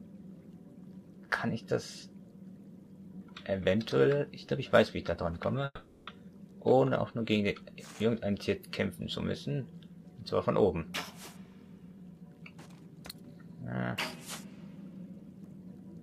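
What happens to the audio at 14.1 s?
Nothing goes wrong at 14.1 s; the audio runs on intact through that moment, with no dropout, click or other disturbance.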